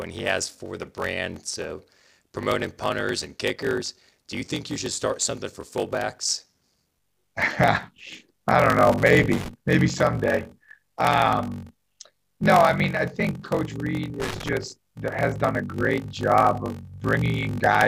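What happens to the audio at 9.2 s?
At 9.2 s you're in the middle of a loose connector crackle that runs from about 8.92 to 9.49 s. A worn or dirty contact is making and breaking as it shifts, chopping the signal up, so you get a ragged burst of scratchy crackle for just over half a second.

Under that there's the block size mismatch (padded) that runs all through the clip. Each block is shorter than the next stage expects, which fits a 1024-sample read, and the leftover is zero-filled. That gives a steady 46.9 Hz buzz, and everything plays at 0.861× speed at roughly normal pitch.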